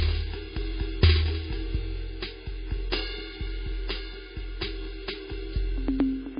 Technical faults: MP3 compression

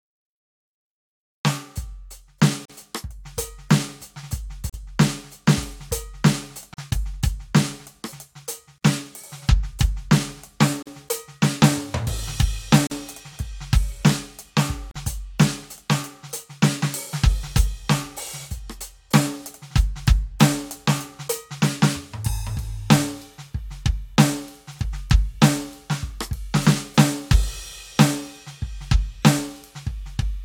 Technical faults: gap at a join of encoded pieces

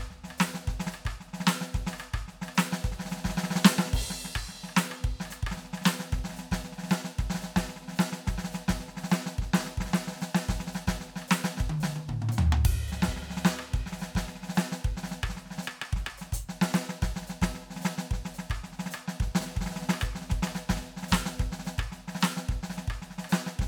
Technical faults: none

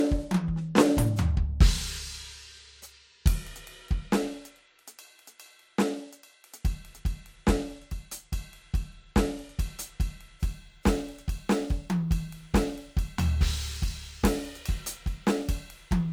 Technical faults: sample clock jitter

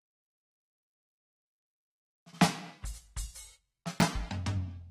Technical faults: AAC compression; chunks out of order

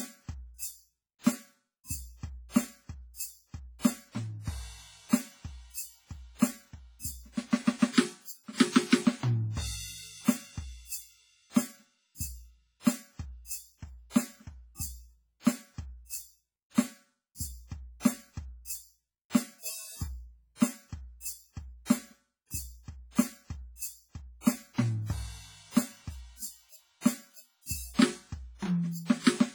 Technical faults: WMA compression

